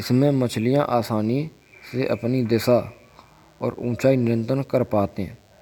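From the first moment to the last, the speech carries a DECT cordless phone buzz: a thin, steady rasp sitting far beneath the voice, roughly 40 dB down. A nearby DECT handset or base fires a radio burst every 10 ms, and the audio circuitry rectifies it into a 100 Hz pulse train. On a spectrogram this shows as evenly stacked horizontal lines at 100 Hz and its multiples, unbroken through pauses. The waveform shows sharp, regularly spaced spikes in the gaps.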